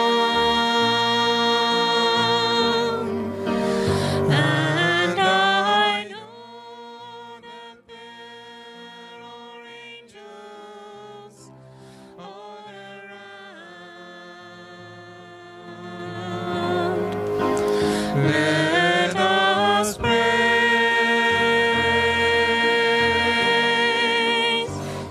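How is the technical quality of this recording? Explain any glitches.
Two stretches of zipper noise mar the level moves. From 5.88 to 6.28 s the sound drops by roughly 20 dB. From 15.6 to 16.72 s it rises by a similar amount. Each move is made in steps of about 3 dB, not a continuous ramp. The first goes at around twenty steps a second, the second at about seven. Every jump leaves a small click. The clicks string together into an audible ticking or zipping.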